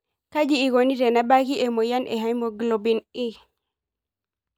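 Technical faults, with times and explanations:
No technical faults can be heard in this speech.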